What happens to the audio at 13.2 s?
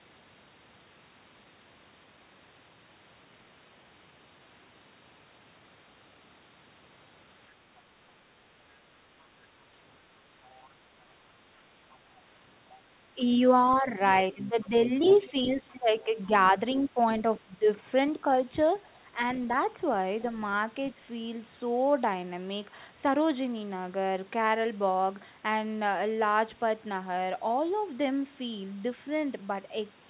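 The speech briefly dips by roughly 10 dB from 13.15 to 13.22 s, likely speech suppressed in double talk: the echo canceller turned the talker down along with the far-end echo.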